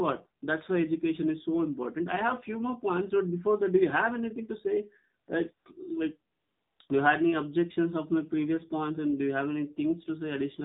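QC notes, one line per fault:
Throughout: AMR narrowband mobile codec. The whole clip has come through an AMR-NB link, and the coding damage is plainly audible. Nothing above 4 kHz survives, so it's got that boxed-in phone sound, and at around 7.4 kbps there aren't many pulses per subframe left to drive the vocal-tract model. That's why the voice comes across buzzy and a bit synthetic. It's the classic low-rate mobile call sound.
5.26, 5.54–5.66, 6.32–6.80 and 6.89 s: AMR comfort noise. Right after "have anything to say" the phone decided the talker had gone quiet and stopped sending speech frames, for 20 ms, then 120 ms, then the longest gap of 480 ms, then another 20 ms. In those gaps the receiver fills in smooth generated noise built from a rough level and spectrum estimate. So the real background drops out and a steadier hiss flicks in and out in its place.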